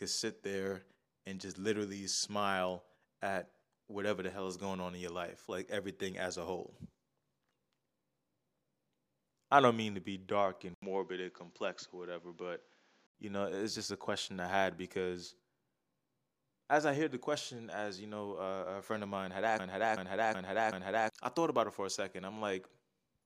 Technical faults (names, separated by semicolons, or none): input switched to a poorer device; broken-record loop